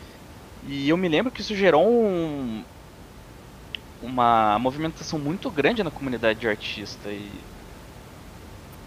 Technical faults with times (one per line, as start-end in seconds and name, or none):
none